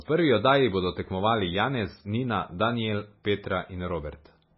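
From start to finish the speech has a hard ceiling: nothing gets through above 5.6 kHz, so the s sounds lose their bite and everything comes across dull and boxed-in. On top of that there's heavy swirly, watery smearing, with weak detail flickering in and out. That's most likely MP3 compression at a very low bitrate, around 16 kbps. The encoder ran out of bits, chopped the treble and kept dropping quieter frequency content frame by frame.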